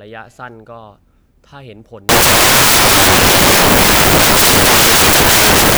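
From 2.09 s to the end of the speech, the samples are built from the wrong bytes: the reader misassembles each sample, so the rapidly varying low-order bits land in the most significant position. The result is loud, harsh broadband noise, close to white on the louder passages.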